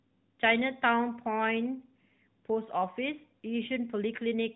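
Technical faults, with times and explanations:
No technical faults detected.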